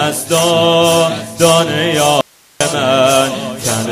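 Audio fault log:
2.21–2.61 s, audio dropout to a faint residue: the sound cuts out abruptly for about 0.4 s, 396 ms in all, then returns mid-flow. The gap is not silent. It holds only hiss, roughly 35 dB below the normal level. The break is sharp, with no fade or natural pause. The signal was likely lost upstream while the path after the break stayed live, so its own noise floor carries through the gap.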